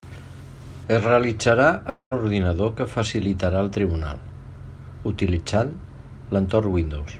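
A long network dropout runs from 1.89 to 2.13 s. The speech breaks off and its last sound is drawn out into a fading buzz, then about 0.1 s of silence. The speech resumes with 0.22 s missing, likely because packets stopped arriving.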